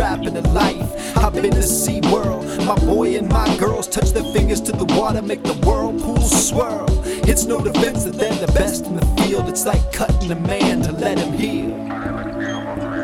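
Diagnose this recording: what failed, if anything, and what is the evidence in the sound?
Nothing in the signal chain shows a failure: no dropouts, clicks, clipping, level jumps or timing breaks are audible at any point in the recording.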